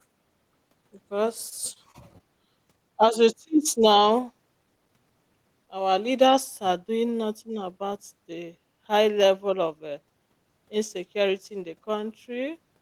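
Speech, with repeated packet loss (robotic sound) from 1.49 to 2.21 s. Four brief holes, the longest about 24 ms, are patched by stretching the preceding sound. That repair covers about 80 ms, roughly 11% of the stretch. It leaves choppy speech with pieces missing there.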